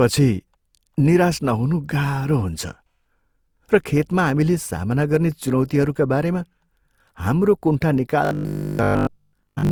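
Throughout, the speech sounds swirly, hollow and smeared, with blurred attacks: generation loss, likely from re-encoding with Opus at 64 kbit/s about four times. From 8.25 s, just after "हाम्रो कुण्ठा", to 9.71 s, it turns into a rigid metallic 50 Hz buzz: robotic sound from repeated short buffers. The likely cause is that most of the audio there was replaced by repeats of a 20 ms chunk.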